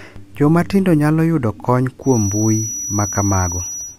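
From 2.0 s to the end at 3.99 s, just after "tindo nyalo yudo kony", a thin, steady whistle near 5.9 kHz sits behind the speech, roughly 10 dB below it and swelling and fading slowly in level. This is a feedback whistle. The likely cause is a loudspeaker-to-microphone loop sitting right at the edge of feedback, so that one high frequency keeps recirculating and ringing on without building into a full howl.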